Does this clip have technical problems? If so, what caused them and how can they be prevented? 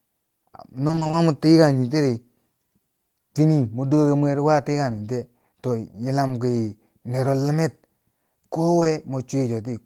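Yes. Between 0.87 and 1.15 s there is repeated packet loss (robotic sound): seven gaps, none longer than 20 ms, each patched by extending the sound just before it, so about half of that 140 ms-filled stretch is synthetic. Because the holes arrive in quick succession, the patches merge into a choppy texture rather than isolated blips, which separates it from a single dropout. A jitter buffer with more headroom and a steadier network path, or forward error correction, would prevent it.

Short concealed packet loss occurs at 6.27–6.31 s and twice back to back at 8.79–8.83 and 8.83–8.87 s, each time 20 ms going missing. The decoder bridged each hole by continuing the preceding sound and fading back into the real signal, so each one comes across as a brief smear or wobble instead of a click or a silent gap. Unlike the 0.87 s burst, these are isolated, so no robotic quality builds up. Reducing packet loss on the link, or adding redundancy to the stream, would prevent them.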